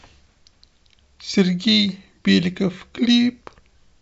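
No technical faults can be heard anywhere in the recording.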